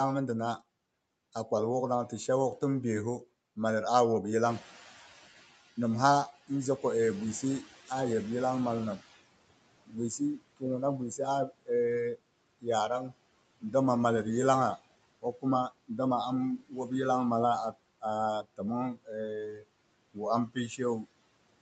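It's a speech recording run through a call path, with nothing above 8 kHz, as you'd expect from a wideband Opus link. There are noise suppressor artifacts all the way through: it's pulling the background down by about 21 dB frame by frame, so the noise dips between phrases and swells back under them. Around 4.5 s the room noise jumps by about 14 dB, and you can hear the noise suppressor catching up from 4.49 to 9.19 s. Its noise estimate takes roughly 4.7 s to adapt, so the louder noise leaks through at first and then gradually sinks, ending up about 18 dB down. After that it starts eating speech. There's speech cut by the noise suppressor at 9.86 to 13.74 s (dips of about 22 dB), 14.77 to 15.99 s (about 18 dB), 16.58 to 16.91 s (about 13 dB) and 17.72 to 21.08 s (about 21 dB). In each stretch, well under a second of quiet bits sounds swallowed, because the suppressor mistook them for noise.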